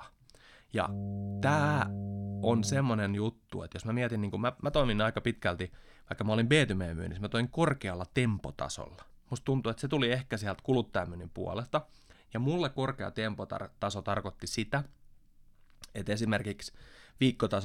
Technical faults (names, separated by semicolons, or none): mains hum